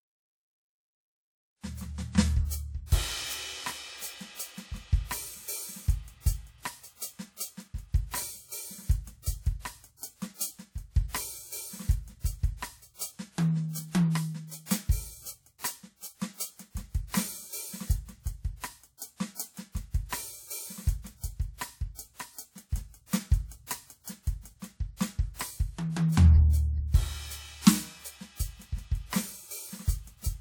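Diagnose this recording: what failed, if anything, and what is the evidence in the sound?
The codec failed here, with pre-echo on a single attack in the music. At 15.58 s a short hiss rises out of a quiet moment. It lasts about 57 ms, until 15.64 s, where the attack lands. The onset sounds blunted and smeared. A transform codec spreads its quantisation noise across the whole block. The attack sat late in that block. Noise sized for the loud hit therefore leaked into the quiet moment before it.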